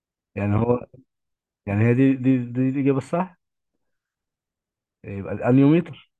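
Nothing in this recording trips any technical alarm: no dropouts, clicks or glitches turn up anywhere along its run.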